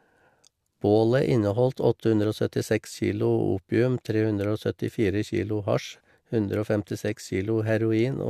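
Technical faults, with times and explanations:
Nothing technical stands out here; the speech just runs along without a hitch.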